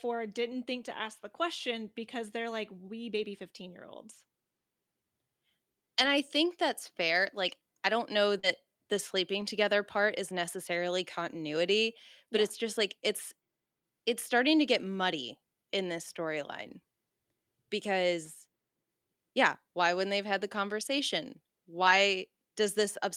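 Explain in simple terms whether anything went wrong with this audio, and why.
Yes, a few short spots were damaged as the audio travelled over the network, and two related faults are involved.

The first is a lost packet rebuilt from error correction. It happens at 3.17 s, 6.01 to 6.07 s, 7.23 s just after "I think that's", 8.43 to 8.45 s just after "I don't know", 9.41 to 9.43 s, and 21.87 to 21.93 s just after "they've had the conversation". In each case a small piece of the speech went missing, but the piece that arrived next carried a rough backup copy of it, and the receiver played that copy instead. So nothing drops out. For about 20 ms, or 40 ms at 6.01 s and 21.87 s, the speech turns grainier and noisier and then clears.

The second is short concealed packet loss, at 8.39 to 8.45 s. Here no backup arrived for part of the gap, so the receiver had nothing real to play. For about 37 ms of the 40 ms that went missing, it kept the last sound going, then blended back into the actual speech. 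That makes a brief smear or wobble, and a short sound there can disappear. The difference: the rebuilt spots are real speech at lower quality, while the concealed spot is filler the receiver made up on its own.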